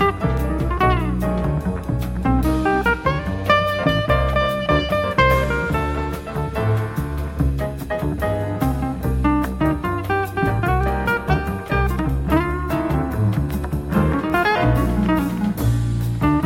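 No technical faults can be heard anywhere in the audio.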